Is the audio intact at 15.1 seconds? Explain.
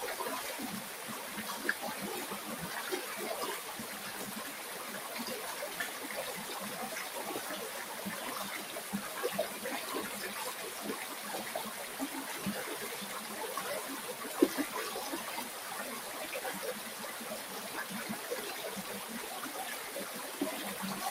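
No, not really. At 15.1 s, as across the whole clip, a noise suppressor built for speech is working on these sounds. It treats steady tones, ambience and tails as noise and pulls them down by around 5 dB, while attacks mostly pass, so the level keeps swinging.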